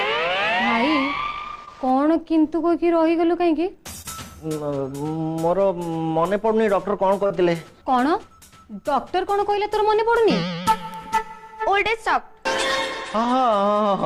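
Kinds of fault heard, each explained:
Short concealed packet loss: packets arrived too late to decode, so the preceding sound was stretched across 20 to 40 ms gaps, leaving three brief smears.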